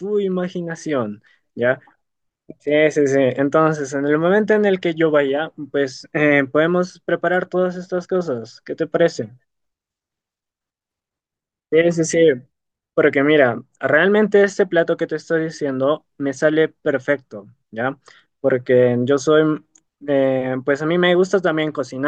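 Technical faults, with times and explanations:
No technical faults are present in this speech clip.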